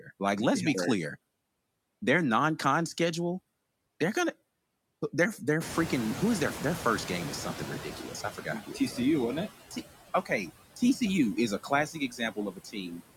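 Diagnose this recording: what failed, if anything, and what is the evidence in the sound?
The failure is in call processing, in the noise suppressor. Throughout, you get noise suppressor artifacts. It's knocking steady background down by about 20 dB, so the residue pumps between phrases.

At about 5.5 s the room noise jumps by about 21 dB, settling roughly 13 dB under the speech. The noise suppressor is catching up from 5.6 to 8.36 s. Its noise estimate takes about 2.8 s to adapt, so the noise comes through only about 10 dB reduced at first before sinking.

There's also speech cut by the noise suppressor at 8.23–8.98 s, 10.25–10.51 s, 10.76–11.01 s and 11.63–13.01 s. It mistakes bits of speech for noise and pulls them down by about 11 to 17 dB, so endings and soft bits sound swallowed, worst in that last stretch.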